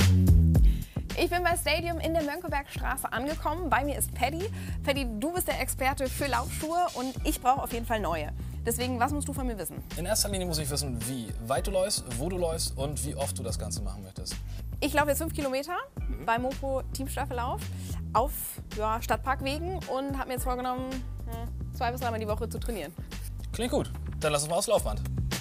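Nothing goes wrong anywhere in this audio: no dropouts, glitches or other faults turn up at any point along the way.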